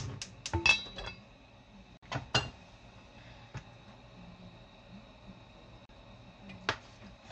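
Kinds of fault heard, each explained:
Gap at a join of encoded pieces: separately encoded segments were joined with each run's start-up delay and last-frame padding left in, so the sound drops out for 52 ms at 1.97–2.03 s and 37 ms at 5.85–5.89 s, then resumes where it stopped.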